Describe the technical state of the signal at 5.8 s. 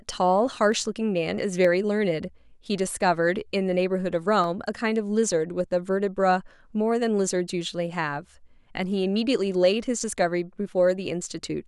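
At 5.8 s the signal is intact, with no audible technical fault at that moment.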